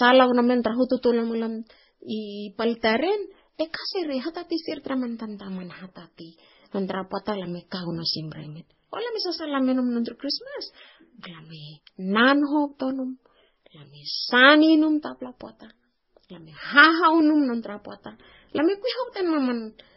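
From start to finish the speech has a hard ceiling at about 5.6 kHz. On a spectrogram this shows as an empty band above that line for the whole clip, with smeared, blocky time-frequency patches below it. The sound is dull and swirly with a metallic, watery edge, and two kinds of coding artefact are layered on each other. That mix likely comes from transcoding between lossy codecs, which fits a low-bitrate MP3 re-encoded to WMA.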